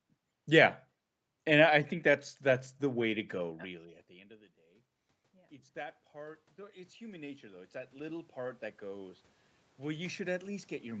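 Automatic gain rising begins at 4.56 s, just after "the end of the", and runs to 11.0 s. The input had fallen by about 24 dB, so the gain control climbs slowly to compensate, and the speech and room noise swell up together.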